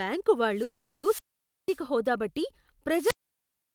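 At 0.53 s there's a wireless microphone squelch dropout: the FM mic's radio signal fades, hiss rises, and the receiver mutes the output for about half a second before the speech returns around 1.82 s.

Inside that stretch, from 0.63 to 1.05 s, there's a call audio freeze. For 400 ms the last bit of sound is held and smeared into a buzzy, fading tone, with no true silence. The likely cause is delayed packets draining the jitter buffer. When the stream resumes, nothing is missing, but everything after it runs 400 ms later.

A second wireless microphone squelch dropout starts at 2.94 s and runs to the end. The hiss swells as the signal fades, then the squelch cuts in for a mute of roughly 0.9 s, so the speech doesn't come back before the clip finishes.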